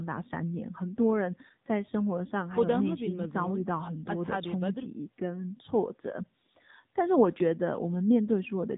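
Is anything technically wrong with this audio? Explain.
Yes. An AMR narrowband mobile codec is at work for the whole clip. The speech has been squeezed into the 8 kHz telephone format and rebuilt from a simple model of the vocal tract, driven by a few pulses in each short slice of every 20 ms frame. Nothing above about 3.8 kHz survives, so the speech sounds boxed-in and dull. The coding damage is plainly audible as a buzzy, synthetic edge, which fits one of the lower AMR-NB modes, around 7.4 kbps.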